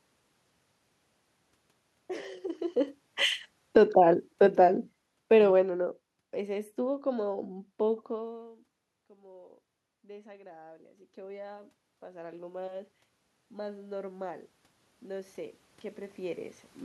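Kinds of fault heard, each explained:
automatic gain falling: From 3.61 to 6.40 s, just after the talker's distance changes around 2.5 s, the gain control gradually pulls the level down by about 15 dB. The room noise sinks together with the voice, which separates it from a talker moving away.
automatic gain rising: Once the voice drops about 24 dB near 8 s, the control slowly raises gain by about 19 dB from 8.12 to 16.56 s. Voice and room noise swell together over eight seconds, unlike a talker leaning in, where only the voice grows.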